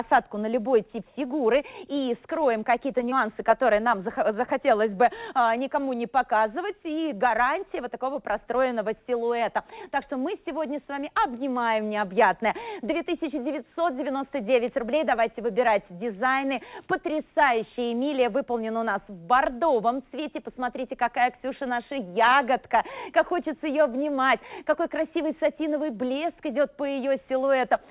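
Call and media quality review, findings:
Short concealed packet loss at 3.10–3.13 s and 4.45–4.50 s: brief smear where roughly 20 ms of audio never arrived and the receiver extrapolated over it. Band tops out at 4 kHz, consistent with G.711 narrowband.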